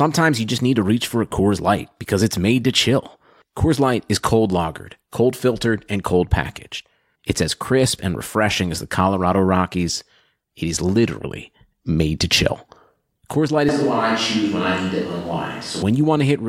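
A short speech recording has a switch to a distant microphone from 13.69 s to 15.82 s. The sound abruptly turns roomy and hollow, loses low end, and carries room noise around 25 dB below the speech, while the overall level stays roughly the same. It snaps back just as suddenly at 15.82 s. The likely cause is that the close microphone dropped out or was left out of the mix for that stretch, leaving only a farther pickup such as a camera microphone.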